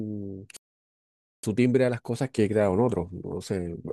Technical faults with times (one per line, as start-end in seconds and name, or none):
0.57-1.43 playback stall
1.43-3.92 time-compressed catch-up